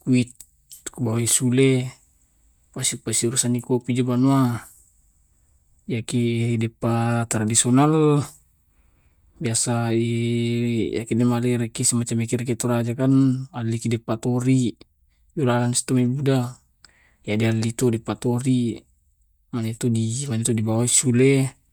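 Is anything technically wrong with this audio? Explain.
No, nothing is technically wrong with this audio.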